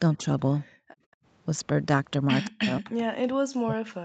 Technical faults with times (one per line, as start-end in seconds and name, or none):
0.17-0.23 speech suppressed in double talk
0.70-1.24 background gated by the echo canceller
2.45-2.50 echo leak
2.49-4.04 speech suppressed in double talk